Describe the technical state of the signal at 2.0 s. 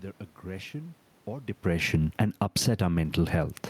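Automatic gain falling, from 1.93 to 2.47 s, just after "aggression or": the gain control judged the input too loud, or its background noise too strong, and pulled its gain down by about 10 dB over half a second, so the speech sinks steadily and the room noise drops with it.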